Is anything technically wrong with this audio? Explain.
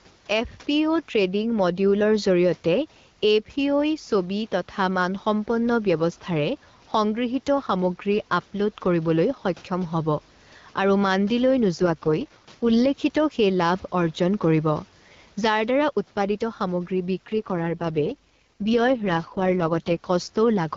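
Yes, two things stand out.

Gain pumping runs through the whole clip. The level keeps breathing: the background swells up in the pauses, then ducks by something like 5 dB whenever the speech gets loud, so loud and quiet passages end up squashed closer together. The likely cause is input gain set far too hot for the mic, with a fast limiter or compressor clamping down on every loud moment and letting go between them.

There are also two AMR rate drops, from 11.77 to 12.87 s and from 17.27 to 20.06 s, lasting about 1.1 s and 2.8 s. The bandwidth stays the same and there's no dropout, but the speech turns noticeably rougher, raspier and more synthetic. That fits the network pushing the AMR-WB codec from the 12.65 kbit/s it uses elsewhere down to 6.6 kbit/s, spending bits on error protection over a weak radio link, then recovering.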